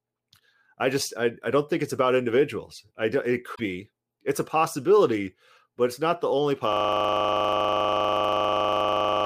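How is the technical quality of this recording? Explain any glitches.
The recording has two clear faults: a brief corruption glitch early on, and a lockup that takes over the final few seconds.

From 3.52 to 3.60 s, just after "individuals i do it", there is damaged data in a compressed stream. Corrupted bytes made the decoder misread those frames, lose sync and jump to the next valid frame header. This produces a short glitch of about 80 ms. In the waveform there is an abrupt discontinuity.

From 6.73 s to the end, right after "it's not the only", a system hang loop takes over. The system froze while the audio hardware kept replaying its ring buffer. A single 40 ms piece repeats about sixty times at 25 Hz, which fits a buffer of that length. The result is a rough, steady buzz. The waveform shows an identical block tiled end to end. The spectrogram shows a frozen spectrum with regular vertical striping at 25 Hz.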